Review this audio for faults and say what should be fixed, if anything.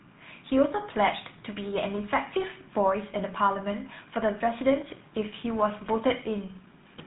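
The speech throughout has a buzzy, gravelly roughness, and nothing sounds above about 3.8 kHz. That points to a GSM full-rate codec, and the damage is plainly audible. The codec models the vocal tract and drives it with a sparse, regularly spaced pulse excitation. That coarse excitation leaves the grainy buzz. The narrow line band, roughly 150 Hz to 3.7 kHz, removes the upper range, which fits GSM full rate at 13 kbps. Prevent it by capturing or routing the audio over a wideband path instead of a GSM narrowband link.

From 4.50 s to the end, the speech turns thin, bright and sibilant. This is pre-emphasis left on: the treble was boosted for recording or transmission and the matching de-emphasis cut was never applied. High frequencies are about 8 dB too strong at 10 kHz relative to 1 kHz, which fits a 50/15 µs CD emphasis curve. Prevent it by making sure playback or decoding applies de-emphasis whenever material carries an emphasis flag.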